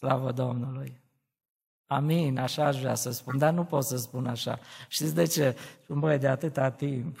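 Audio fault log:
3.29–3.35 s, corrupt frame decoded: flipped bits in one compressed frame were played regardless, misplacing energy into a short glitch near -20 dBFS, between "așa aș vrea să" and "dar nu pot să".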